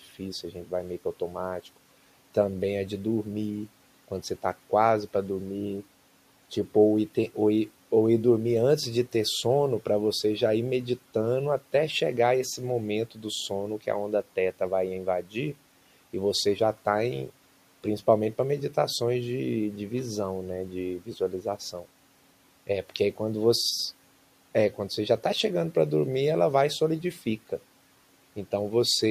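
At 15.23 to 15.36 s there's speech cut by the noise suppressor: it mistook a soft stretch for background and pulled it down about 9 dB, so roughly a tenth of a second sounds swallowed.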